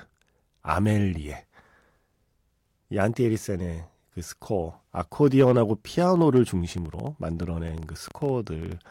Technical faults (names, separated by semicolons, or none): train of clicks